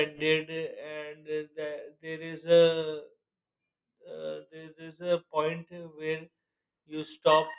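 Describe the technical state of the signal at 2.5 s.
At 2.5 s the speech signal is intact, with no audible fault at that moment.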